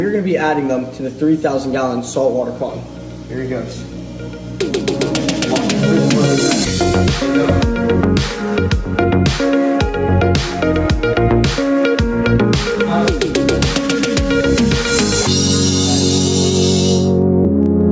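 Gain pumping runs through the whole clip, with the level swinging by around 10 dB. The likely cause is input gain set far too high, with a fast limiter clamping each peak, leaving the dynamics squashed. The call's microphone processing tops out near 8 kHz.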